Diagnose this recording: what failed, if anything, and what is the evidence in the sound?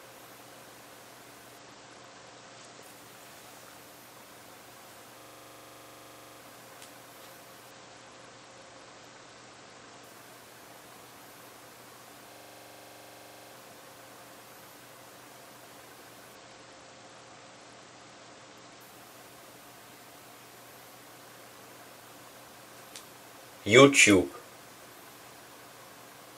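Three Bluetooth SBC bit pool drops sit in the codec stage, at 1.58–2.83 s, 7.71–10.04 s and 16.35–18.81 s. In each, the treble dulls and a gritty quantisation noise rises, then clears when the rate recovers. The link was congested, so the encoder cut its bit allocation, which fits a fall from bit pool 31 to about 9, near 72 kbps. On a spectrogram the upper sub-bands go dark or patchy across those spans, with a grainy noise floor below.

A system hang loop, a driver or buffer fault, occurs at 5.21–6.40 s and 12.33–13.53 s. A single 42.67 ms slice repeats exactly, giving a rough buzzing stutter at 23.4 Hz. The host froze while the hardware kept replaying its ring buffer, which fits a 2048-sample buffer. On the waveform each span shows an identical block tiled end to end. On a spectrogram it shows as vertical striping at a steady 23.4 Hz spacing.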